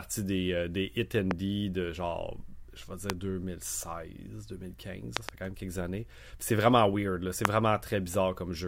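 Loud pops land at 1.31–1.33 s after "des euh des hit", at 3.10–3.12 s, as a double pop at 5.17–5.31 s before "quand même quelques années", and at 7.45–7.47 s after "vraiment weird c'est". Each sharp pulse peaks about 20 to 25 dB above the speech, which carries on underneath. The likely cause is a voltage spike from a plug, switch or static discharge entering the signal path.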